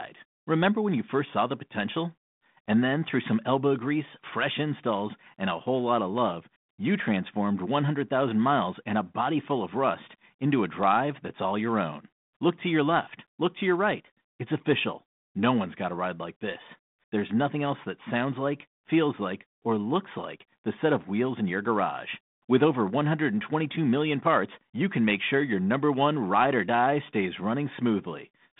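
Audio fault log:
No faults heard.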